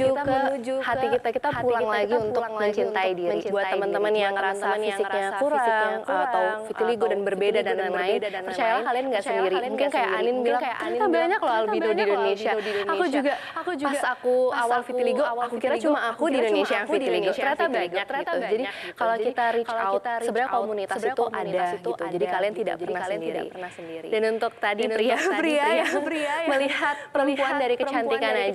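Throughout, a doubled audio track: a clean, somewhat quieter copy trails by about 0.7 s, likely a second capture path, with no decaying repeats or room colour, unlike echo.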